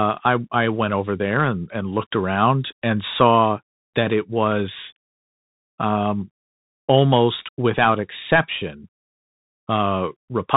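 From start to finish the speech carries Bluetooth CVSD headset codec damage, and it is plainly audible. The encoder tracks the waveform one bit at a time, stepping up or down with an adaptive step size, a grainy character that fits a 64 kbps CVSD link. Nothing passes above about 3.8 kHz, so a spectrogram shows a flat ceiling there with empty space above. Sibilants come out scratchy, loud bright passages distort as the step size lags, and a granular hiss sits beneath the speech.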